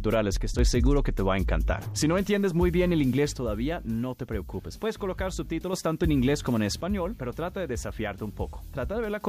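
The level drops abruptly by about 6 dB at 0.37–0.59 s, 3.33–5.73 s and 6.81–9.21 s. This is likely one channel dropping out before the mono sum.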